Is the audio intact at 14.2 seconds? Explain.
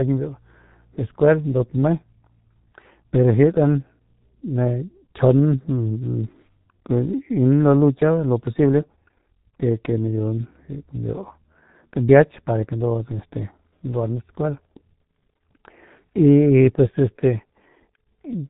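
No. At 14.2 s, as throughout the speech, the G.723.1 codec's heavy damage is audible: nothing passes above 4 kHz, and its slowly updated voice model blurs consonants into a muffled, hoarse sound that fits roughly 6 kbit/s. A spectrogram shows an empty band above 4 kHz and smeared, blocky frames.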